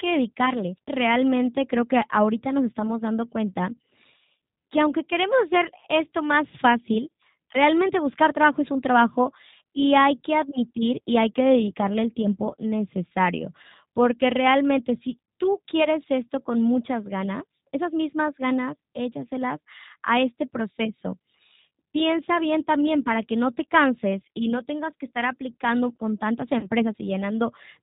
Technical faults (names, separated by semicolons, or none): G.729 codec; VoIP packet loss concealed by the speech codec